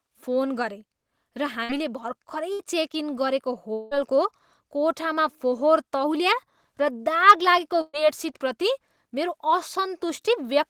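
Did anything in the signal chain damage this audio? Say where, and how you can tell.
Yes, the damage happened in the network stage. There are bursts of packet loss at 1.63–1.72 s, 2.53–2.62 s and 7.81–7.96 s. In each, the speech stops advancing and the last sound is held and fades as a buzz or hiss. That concealment lasts about 56 ms, 62 ms and 123 ms, and the last gap ends with about 10 ms of silence. The speech then picks up about 60, 60 and 120 ms further on, so those stretches are gone.

At 3.73–3.94 s a longer gap appears. The receiver holds and fades the last sound for about 179 ms with no silence after it, then the speech resumes about 180 ms later than where it stopped. That stretch never reached the output. The length and the fade point to a likely long network dropout rather than a single short burst, with the jitter buffer concealing the whole span.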